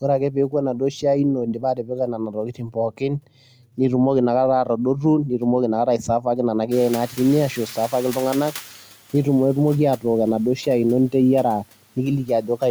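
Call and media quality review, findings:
Speech cut by the noise suppressor: soft consonants and word endings swallowed, up to about 12 dB down, at 0.01–1.05 s, 1.36–3.28 s (ending before "nitumoki inakata"), 4.65–5.43 s (after "nitumoki inakata"), 5.86–6.72, 7.07–7.2, 7.56–8.54, 11.96–12.62 s. Cause: suppressor classing low-level speech as noise and attenuating it with the background.

Noise suppressor catching up, 6.71–8.82 s: room noise jumps by about 24 dB near 6.5 s and comes through underreduced, sinking over 2.11 s to about 9 dB of reduction. Cause: suppressor's noise estimate lagging the sudden rise, then adapting.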